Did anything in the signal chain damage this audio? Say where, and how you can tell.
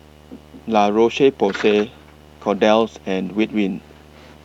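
Yes. In the analogue wiring, a screen or video cable is coupling into the audio, causing video or display buzz. A 75 Hz buzz with hash above it runs under the speech throughout, roughly 30 dB below it, pulsing at the display's field rate.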